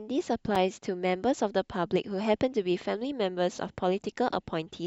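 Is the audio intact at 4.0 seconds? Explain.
Yes, at 4.0 seconds the speech plays through intact, with no dropout, click, distortion or other fault.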